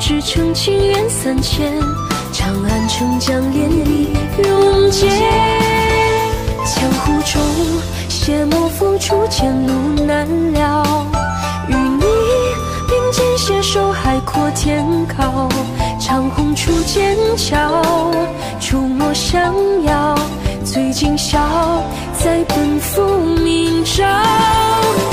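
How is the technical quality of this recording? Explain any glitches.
There's one real problem: a doubled audio track running from 3.58 to 6.72 s. For those few seconds a second full-band copy of the sound trails the original by around 200 ms, roughly 5 dB quieter. It has no reverb tail or room colour, just a clean echo, and it switches in and out abruptly at both ends. The likely cause is the same signal reaching the mix twice, with one route lagging behind.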